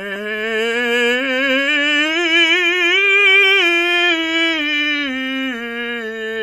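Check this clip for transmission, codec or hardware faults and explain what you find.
One codec fault runs through the whole music clip. It sounds like WMA compression, which is the likely cause. Nothing is left above 15.4 kHz, so the top end is cut off. A transform codec like this works in long blocks. Its quantisation noise smears across tens of milliseconds, and weak spectral lines are dropped to zero. The damage is plainly audible. The music rings and sounds washy, with hiss that swells and fades with the signal. This fits a bitrate near 48 kbps.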